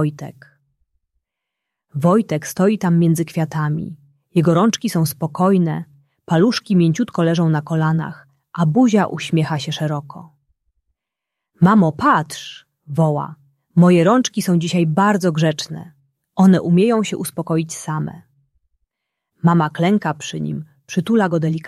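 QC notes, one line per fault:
Nothing here needs flagging; the audio runs from beginning to end without any trouble worth a line.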